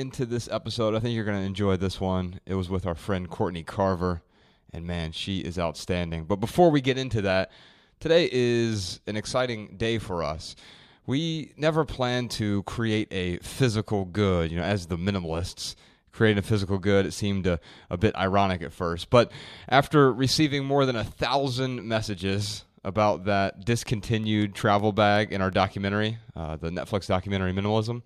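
From 23.86 to 25.54 s, a steady ticking of about ten clicks at 5.4 per second sits over the speech, each roughly as loud as the voice. This train of clicks likely comes from interference or a faulty connection repeatedly injecting the same pulse.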